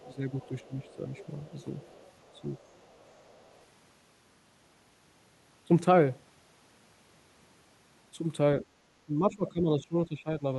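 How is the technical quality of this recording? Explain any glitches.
The recording has two linked echo-control problems in its first few seconds and again near the end.

Other side's voice leaking through: from 0.0 to 1.26 s and again from 1.6 to 3.58 s, a faint second voice sits under the talker, about 25 to 30 dB down. It is likely loudspeaker playback that the echo canceller left in the microphone signal.

Speech suppressed in double talk: at 0.05 to 1.1 s, 1.46 to 1.66 s, 2.35 to 2.47 s and 9.06 to 10.44 s, the talker's level dips by about 10 dB, reaching about 15 dB at the end. The likely cause is the echo canceller turning everything down while both sides talked at once.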